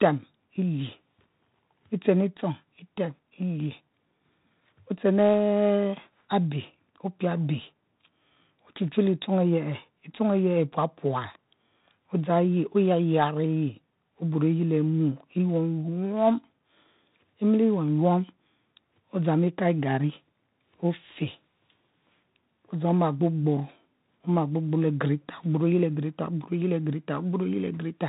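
From start to finish the speech carries 4-bit ADPCM compression. Each sample is coded as a coarse 4-bit step from a predicted value, so a gritty hiss rides on every loud passage and rises and falls with the level. Sharp onsets sound rough because the adaptive step cannot keep up. The damage is heavy, and nothing is present above 3.8 kHz, which fits a low sample rate and a 32 kbps stream and leaves the sound dull.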